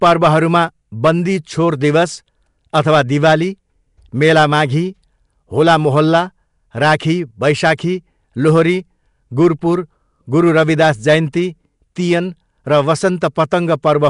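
Hard clipping runs through the whole speech clip: the signal was driven about 8 dB past what one stage could pass, so around one percent of samples had their peaks cut flat. The flattened tops add high harmonics that appear only on loud moments, which separates this from codec noise.

Throughout, the speech also carries a rough, hissy halo and a smeared, underwater quality, with nothing above 10.6 kHz. The likely cause is Nellymoser compression, at a rate that fits about 44 kbps. Weak bands are refilled with noise rather than cut cleanly, unlike a simple low-pass.

At 7.77 s there is pre-echo: a transform codec spread quantisation noise across its block, so a hiss about 12 ms long fills the quiet moment just before a sharp attack. The noise comes before the attack rather than on it, unlike clipping.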